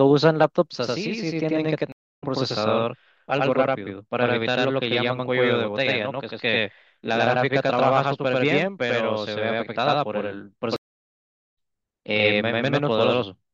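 A speech clip with a slap echo trailing every sound at the same level from 0.73 s to the end: a channel delay (doubling), one channel about 93 ms late, which fits a 4096-sample buffer, summed to mono. The audio drops out at 1.92 to 2.24 s (273 ms) and 10.76 to 11.54 s (779 ms), resuming roughly 0.2 s and about a second further on. These are stream reconnects, where the player restarted its decoder mid-stream.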